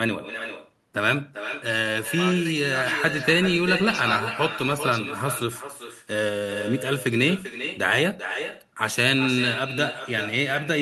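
Throughout the speech, an echo with no canceller returns each phrase around 400 ms later at about 9 dB below the original. The far end's loudspeaker feeds its microphone unchecked, giving a thinner shadow that appears as fainter, delayed copies of each waveform burst and spectrogram pattern.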